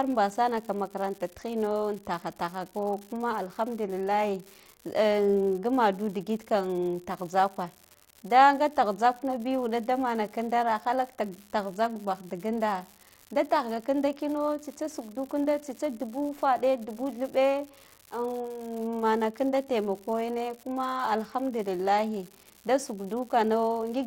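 A steady crackle runs under the speech from start to finish, continuing through the pauses, which points to an unreliable data bit: one marginal data line flips at random, each error adding a fixed spike of about -32 dBFS, so the fizz stays constant regardless of signal level.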